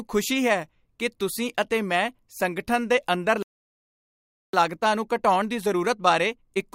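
At 3.43 s the speech stops dead mid-flow and stays silent until 4.53 s, a gap of about 1.1 s. This is a playback stall, most likely the player running short of buffered data or its output thread being blocked. Unlike a brief packet-loss dropout or click, the silence lasts long enough to register as a pause, and the sound then resumes.

From 4.53 s to the end at 6.75 s the speech runs at about 1.1 times normal speed: a time-compressed catch-up as the player works off the backlog left by the stall. It removes small slices of audio and cross-fades the joins, so the speech sounds hurried but keeps its normal pitch. A simple sped-up playback would raise the pitch, which does not happen here.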